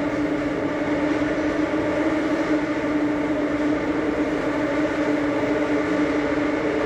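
No technical fault can be heard in this recording of sounds, and the signal stays steady and intact throughout.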